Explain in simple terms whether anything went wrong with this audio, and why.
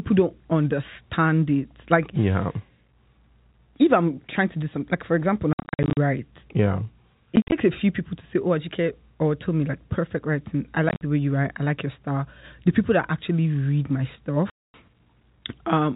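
Yes, the speech drops out in four places because of packet loss filled with silence. Chunks of the call never arrived, and the receiver played nothing in their place. It happens at 5.53 to 5.97 s (the worst, with gaps totalling 0.29 s), 7.36 to 7.52 s, 10.89 to 11.01 s, and 14.5 to 14.74 s. Unlike a fading or crackling line, each hole begins and ends abruptly, and the gap lengths step in even units that fit packets of about 10 ms.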